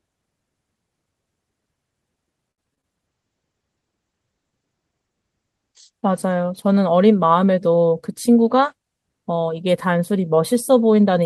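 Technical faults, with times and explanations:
2.51 to 2.85 s, repeated packet loss (robotic sound): four gaps landed in about a third of a second, the longest 65 ms. Each one got bridged by stretching the last bit of sound forward, with around 100 ms filled in that way and some of it simply dropped, so roughly 30% of that stretch is patched. You get a choppy stutter with little pieces missing.
3.09 to 6.79 s, call bitrate drop: the Opus encoder got throttled from 40 kbps down to 18 kbps, sitting at the bottom for about 2.6 s. With that few bits it codes everything more coarsely and narrows the band from 12 kHz to 8 kHz, so the sound goes rougher and the top end dulls until the rate climbs back.
7.92 to 8.54 s, jitter buffer speed-up: the buffer was holding more audio than it wanted, so the receiver trimmed it by snipping out short pitch-period chunks over and over, about 50 ms in total. 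The pitch stays put but the passage plays around 7% fast, so it comes across as slightly hurried and clipped along.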